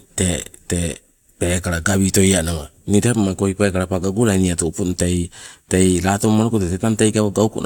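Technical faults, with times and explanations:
Nothing technical stands out in this bit of speech; there's no fault to point to anywhere along it.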